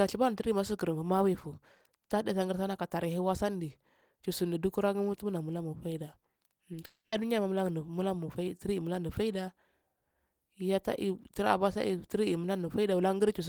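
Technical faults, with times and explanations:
6.73 s, 6.75 to 6.77 s, and 6.82 s: short concealed packet loss. Three brief gaps, each worth about 10 ms of missing audio, fall within a tenth of a second of one another. Because those fragments did not reach the decoder in time, the receiver covered each hole by extending the sound just before it, then crossfaded back into the real signal. This makes a quick smear or wobble rather than a clean break.
6.86 to 7.13 s: long network dropout, likely. For roughly a quarter of a second no fresh audio comes through. The receiver fills about 260 ms by stretching the last sound into a fading tail, ending in roughly 40 ms of silence before real audio resumes. What should have played during that stretch is simply absent. Coming straight after the three short losses, it points to a brief burst of network trouble.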